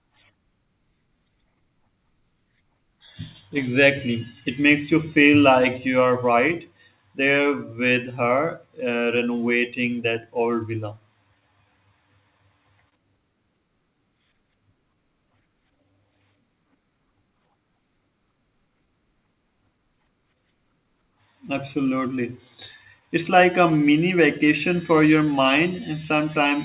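Right from about 0.31 s to 26.26 s you get repeated timing corrections. The receiver keeps stretching things out in small steps, so playback runs at roughly 98% speed and adds something like 0.4 s overall. It comes across as faint hiccups and a slightly uneven tempo.

Behind that is clock drift between sender and receiver. The sender's clock runs around 2% slow, so the jitter buffer keeps draining and has to pad with repeated slivers of audio. Those padding edits land unevenly but all push the same way.

There are also scattered short gaps where packets went missing. Around 1.07 to 3.57 s there are about three, each a few milliseconds long. Around 11.40 to 12.94 s there are about four, and the longest is roughly 30 ms. Around 22.22 to 26.19 s there are about five more tiny ones.

All of this sits on a narrowband call sound with nothing above 4 kHz, which fits G.711 mu-law.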